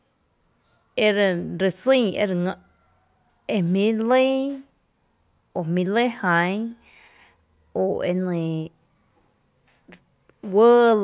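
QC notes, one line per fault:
No technical faults turn up anywhere in the signal, which holds steady in level and continuity across the whole recording.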